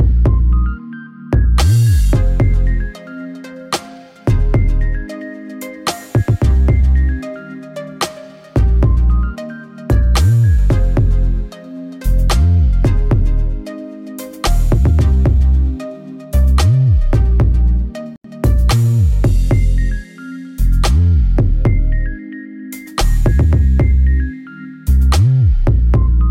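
At 18.16 s the sound drops to silence for about 84 ms before returning, likely a Bluetooth stall: the headphone buffer ran dry while delayed packets were resent.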